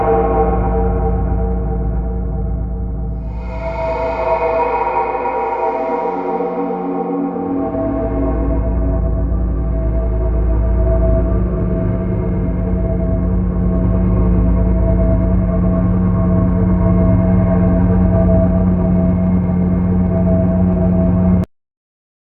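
At 21.44 s the audio has a cut-off end: the sound stops abruptly mid-event and drops straight to digital silence for the remaining 0.9 s of the clip, with no decay or tail. The final stretch of audio was never written out, so playback simply halts. On a waveform the trace falls from active signal to a flat line in a single step. A spectrogram shows energy ending along a sharp vertical edge, followed by silence.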